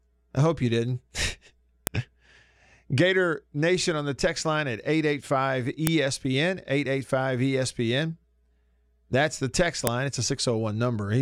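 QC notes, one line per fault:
1.87, 5.87 and 9.87 s: file header played as audio. Speech pieces about 4 s long were joined without their WAV headers being stripped, so at each join a few dozen bytes of header data were read as sample values. Those bytes bear no relation to the waveform around them, so each join produces a sharp, loud click or snap lasting only a moment, the last one landing just after "the text".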